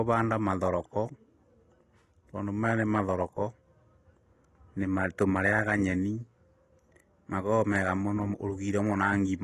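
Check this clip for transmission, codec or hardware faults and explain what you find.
One fault runs through the whole speech clip: AAC compression. A spectrogram shows a flat ceiling at 12.1 kHz. The sound is dull, with fizzy sibilants, likely from coarse AAC-LC quantisation at a bitrate that fits 32 kbps.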